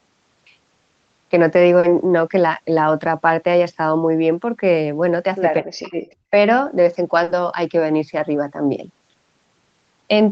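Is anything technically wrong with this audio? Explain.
Yes, the speech has a few short faults.

At 1.79 to 1.86 s and again at 7.23 to 7.30 s there is a brief smear where the sound seems to stretch and blur for a moment. This is short concealed packet loss: about 40 ms of audio arrived too late or not at all, and the receiver bridged each gap by extending the preceding sound before blending back into the real signal.

From 5.6 to 5.96 s the speech drops sharply, nearly to silence at its deepest, for a little under half a second. The likely cause is speech suppressed in double talk: with both ends talking at once, the echo canceller could not separate this talker from the loudspeaker echo and turned the signal down.

At 6.1 to 6.15 s a very faint, delayed copy of the speech appears, trailing the original by about 0.22 s. This is most likely an echo leak, where a loudspeaker's sound reached the far-end microphone and was not fully cancelled before being sent back.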